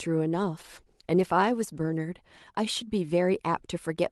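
A speech recording carried over a WebRTC call path shows a call bitrate drop from 0.35 to 2.07 s. The sound turns coarse, which fits the Opus encoder falling from around 32 kbps to about 17 kbps as the bandwidth estimate sagged. Unlike packet loss, there are no gaps or repeated fragments. The degradation is continuous and lifts once the bitrate recovers.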